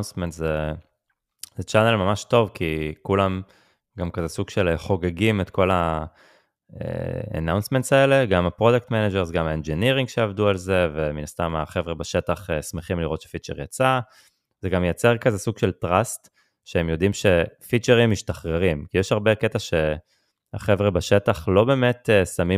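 Clock drift buffer slips from 2.36 to 20.63 s: roughly seven regular clicks every 3.04 s in the speech, likely mismatched clocks of about 100 ppm dropping or repeating about 15 samples each time.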